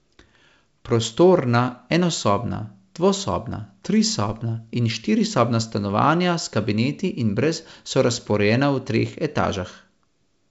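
No faults are audible in the speech; the G.722 wideband telephone coding at 64 kbit/s holds the band up to about 7 kHz, leaving at most a faint trace of its coding in the upper band.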